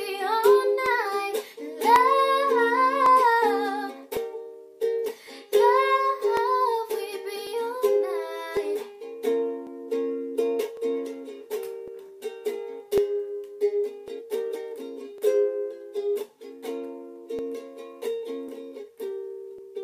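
From 0.86 to 19.58 s, a click recurs every 1.1 s; unlike random dropouts, this steady spacing marks clock drift buffer slips, likely from mismatched device clocks.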